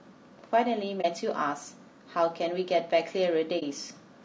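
Throughout the speech, the voice is rough and grainy, with noise filling the gaps between harmonics and a thin, synthetic-sounding top band. This is likely low-delay AAC compression of the AAC-ELD kind, whose short frames resolve pitch poorly, and the damage fits a low bitrate around 32 kbps.

At 1.01 to 1.06 s and again at 3.59 to 3.63 s, the sound dips briefly. This is AAC frame loss with muting: a single frame's worth of audio, about 30 ms, was lost and zeroed, and the overlapping windows taper it in and out.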